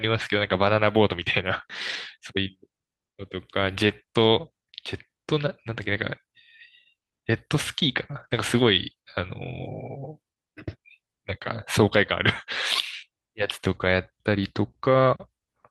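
Around 1.89 to 1.95 s there's a lost packet rebuilt from error correction. About 40 ms went missing, which fits two 20 ms packets, and the decoder played the low-bitrate backup copy carried in the following packet instead. So there's no gap, just a stretch that comes out rougher and a bit noisier than the speech around it. The same thing happens at 3.89 to 3.91 s, about 20 ms, and then a longer one from 8.11 to 8.25 s covering roughly 80 ms.

Short concealed packet loss shows up at 3.87 to 3.91 s, overlapping that second rebuild, and again at 8.27 to 8.31 s, just after the long one. Each time about 20 ms simply didn't arrive in time, and the receiver papered over it by carrying the previous sound forward, pitched if voiced, shaped noise if not, before blending back into the real signal. You hear it as a brief smear or wobble.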